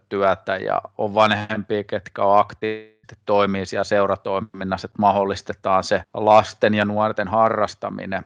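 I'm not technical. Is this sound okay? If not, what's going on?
No. At 2.59 to 2.64 seconds there is a tiny smear or wobble in the speech, a short concealed packet loss. A few hundredths of a second of the call arrived too late to be played, so the receiving phone or app patched the gap by stretching out the sound just before it, then blended back into the real speech. Anything very short said in that instant may be gone.

Right after that, from 2.66 to 3.05 seconds, the speech turns into a buzz or hiss that continues the previous sound and fades, for about four tenths of a second, with no real silence, before normal speech returns. This is likely a long network dropout: the connection stopped delivering audio for that stretch, and the receiver kept filling the gap with an imitation of the last sound. Whatever was said during that gap is lost and does not come back later.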